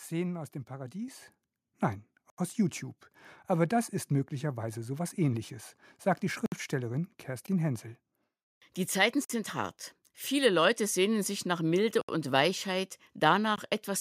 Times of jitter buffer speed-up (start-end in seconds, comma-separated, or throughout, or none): none